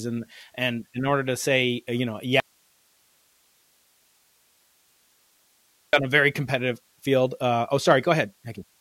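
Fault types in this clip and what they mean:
Audio dropout to a faint residue: the speech vanishes abruptly after "say uh you know", leaving about 3.5 s of hiss roughly 40 dB down, likely a lost input; waveform collapses to a thin hiss band, spectrogram shows flat noise floor.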